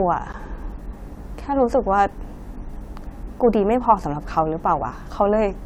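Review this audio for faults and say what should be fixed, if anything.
At 0.32 s a 15 ms block of digital silence cuts the speech abruptly to silence and back, short enough to be heard as a tick rather than a gap. It appears as a flat line on the waveform and a blank strip edged by broadband streaks on the spectrogram. Give output buffers enough headroom to fill in time.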